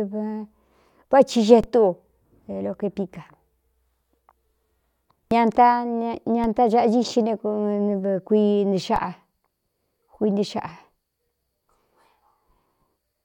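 At 1.64 s, just after "vá ci", then at 6.44 and 8.96 s, a DC step shifts the zero line by about −20 dBFS. Each gives a low thump, decaying through a 20 Hz high-pass.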